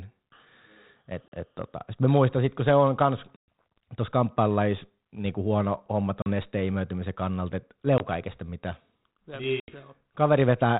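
Packet loss on an ADPCM call hits at 1.28, 3.36, 6.22, 7.98 and 9.6 s. Each gap falls abruptly silent for 20 to 120 ms. The speech then restarts slightly distorted while the decoder's predictor catches up.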